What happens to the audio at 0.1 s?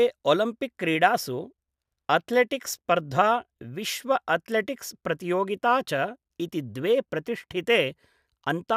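Nothing goes wrong at 0.1 s; the audio is intact at that moment.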